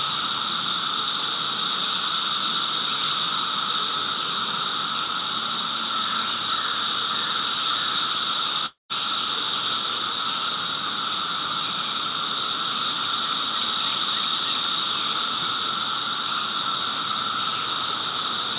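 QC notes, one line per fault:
8.66–8.93 s, long network dropout: sound smears into a fading buzz, then drops to silence, and resumes with roughly a quarter-second missing, likely from lost packets.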